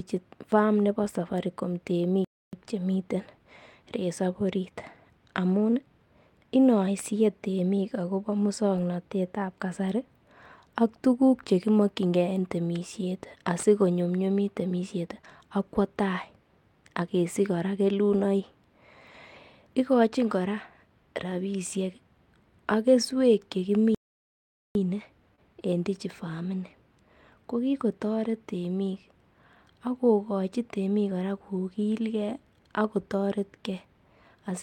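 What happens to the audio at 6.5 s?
Nothing goes wrong at 6.5 s; the speech runs on intact through that moment.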